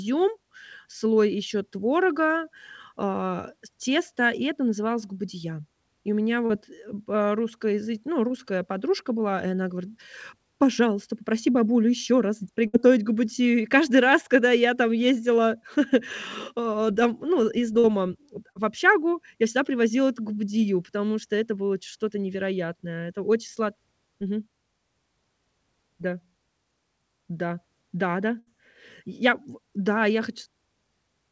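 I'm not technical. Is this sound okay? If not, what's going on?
No. Five brief gaps can be heard where parts of the call's audio were lost on the way and the receiving end had to fill them in.

Three are short concealed packet loss, at 6.46 to 6.51 s, 17.79 to 17.86 s and 18.52 to 18.57 s. In each, about 40 ms of speech never arrived in time. The receiver stretched the last bit of sound across the hole for roughly 35 to 45 ms, then blended back in. This gives a quick smear or wobble, and a short consonant can drop out.

Two are a burst of packet loss, at 12.67 to 12.75 s (about 60 ms missing) and 28.39 to 28.48 s (about 80 ms missing). Here a longer run was lost, so the filled-in sound is held and fades, becoming a brief buzz or hiss. Speech then picks up slightly further on, with that stretch skipped.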